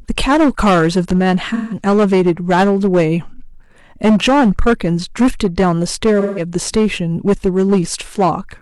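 Hard clipping runs through the whole speech clip: the signal is driven about 10 dB past what one stage can pass, so around a tenth of the samples hit the ceiling and are cut flat. Those squared-off peaks generate harmonics high up the spectrum, so every loud syllable carries a harsh, buzzy fuzz rather than occasional crackle.

AAC frame loss with concealment strikes twice, from 1.54 to 1.81 s and again from 6.20 to 6.43 s. Each time about 0.17 s of coded audio goes missing, which fits a run of about four lost frames, and the decoder fills the gap by rebuilding sound from the last good spectrum. Because that stand-in is pieced together from earlier content, each gap comes out as a brief smeared, noisy patch where the detail of the speech is lost.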